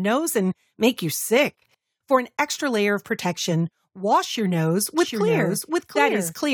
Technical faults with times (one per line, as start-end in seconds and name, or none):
4.98-6.54 doubled audio track